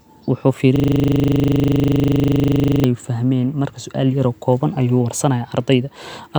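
A system hang loop runs from 0.76 to 2.84 s. The driver stalled while the hardware kept replaying one 40 ms ring buffer about fifty times, so the speech gives way to a steady 25 Hz buzz and roughly two seconds of audio is lost.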